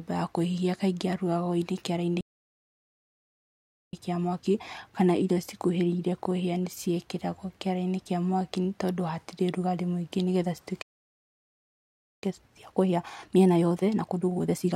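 At 2.21 s the player likely ran out of buffered data, a playback stall: the speech cuts off mid-flow and stays silent for about 1.7 s, resuming at 3.93 s. To work off the backlog, the player then shortens the audio by cutting small pieces out and cross-fading them. This time-compressed catch-up runs from 3.93 to 6.93 s at 1.1 times speed, so the speech sounds slightly hurried at its normal pitch. A second stall silences the speech from 10.82 to 12.23 s, about 1.4 s. The catch-up that follows is harder, at 1.5 times speed, from 12.23 s to the end, and the speech sounds clearly rushed while its pitch stays unchanged.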